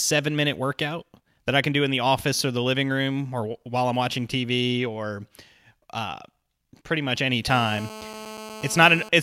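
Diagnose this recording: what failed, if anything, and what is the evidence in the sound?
The analogue wiring picked up a GSM phone buzz from 7.50 to 9.09 s. A hard, raspy buzz at about 217 Hz, full of harmonics, comes in over the speech at about 15 dB below it and stays steady until it stops, which fits a handset on an active call. The phone's transmitter pulses 217 times a second, and some junction in the audio path rectifies those radio bursts into an audible tone unrelated to the program.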